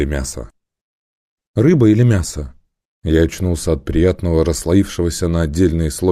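No technical faults are audible anywhere in the audio.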